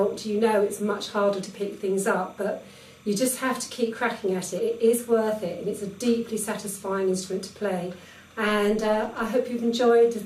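A faint chirping warble sits under the audio for its whole length. This is timecode bleed: linear timecode at 29.97 frames per second leaking in at about 30 dB below the signal. Its square wave flips between tones near 1 kHz and 2 kHz, which shows on a spectrogram as two thin alternating bands with harmonics. Compressed frames are skipped at 4.58 s, where about two frames or roughly 40 ms go missing, and at 8.04 s, where about seven frames or around 150 ms drop out. At each point the audio jumps ahead. The waveform shows a sudden change of shape. From 8.47 to 9.28 s, overlap-add ripple gives a metallic buzz with extra tones around each note. The level pulses by about 6 dB at roughly 200 Hz, because the resynthesis windows do not sum to constant gain. This appears as a regular scalloped envelope on the waveform and fine vertical striping on the spectrogram.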